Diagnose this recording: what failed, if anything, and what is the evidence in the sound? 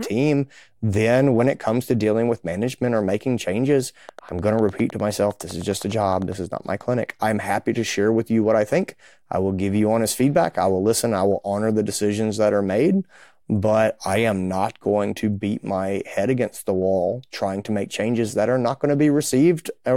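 A train of clicks runs from 4.09 to 6.33 s, starting just after "management or making changes" and stopping before "is not my clinic". About twenty near-identical pops arrive at a regular 9.85 per second, peaking roughly level with the speech and staying audible between syllables. The likely cause is periodic interference coupling into the analogue wiring or a faulty connection or power supply. On a spectrogram they show as evenly spaced vertical broadband lines, and on a waveform as identical sharp spikes.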